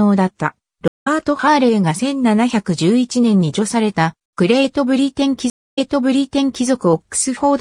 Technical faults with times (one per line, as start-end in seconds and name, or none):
0.88-1.07 stream reconnect
5.50-6.66 stream reconnect